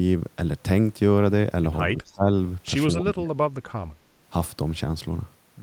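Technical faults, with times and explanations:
1.92–2.29 s and 3.02–3.43 s, speech suppressed in double talk: The echo canceller likely met both sides talking at once, could not tell this talker apart from the loudspeaker echo, and turned everything down. The voice sinks by about 15 dB over roughly 0.3 s in the first stretch, then by about 30 dB over roughly 0.4 s in the second, so it dips and nearly drops out before recovering.
2.06–2.11 s, echo leak: A far-end echo canceller likely failed to remove all of the loudspeaker sound its microphone picked up, so a brief remnant was sent back down the line. It arrives as a faint delayed copy of the voice, trailing the original by 234 ms and sitting about 35 dB below it. It lasts only about 50 ms, falling inside the first suppressed stretch, and is heard as a short ghost.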